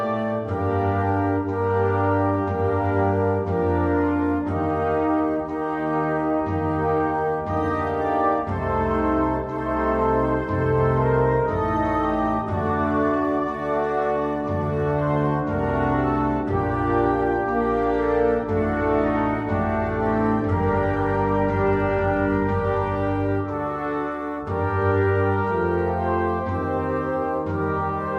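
Listening through the whole recording, nothing stood out as a technical problem at any point.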